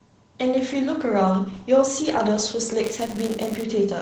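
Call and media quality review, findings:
Opus voice compression, whole clip: SILK coder at 12 kbps, wideband, 20 ms frames. Band capped at 8 kHz, excitation coded coarsely. Speech sounds plainly muffled and hoarse, with a slightly robotic edge throughout.

Buffer tearing, 2.83 to 3.63 s: playback write and hardware read pointers slipped, crossing inside each period. A thin slice of each buffer replays audio about 15 ms stale, with hard joins. Result: a robotic 188 Hz buzz during signal, which fits a 256-sample buffer.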